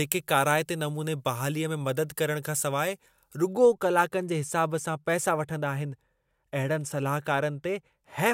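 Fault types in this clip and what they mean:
Pre-emphasis left on: a treble boost applied before recording or transmission was never undone, so the top end stays lifted along a curve matching the 75 µs FM standard, about 14 dB stronger at 10 kHz than at 1 kHz. From 0 to 3.53 s the speech sounds thin, bright and hissy on sibilants. On a spectrogram, energy above a few kHz looks clearly denser there, and the waveform shows sharper, spikier transients.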